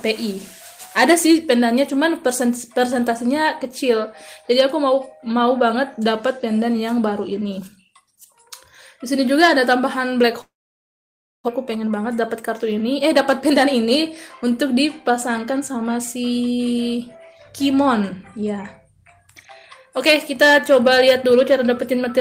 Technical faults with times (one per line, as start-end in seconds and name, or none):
10.41-11.50 long network dropout
11.58-14.03 jitter buffer speed-up
14.44-16.96 jitter buffer speed-up